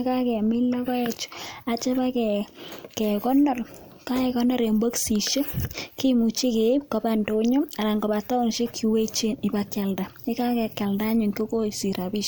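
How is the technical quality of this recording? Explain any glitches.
The recording has no technical glitches; the signal stays steady and continuous throughout.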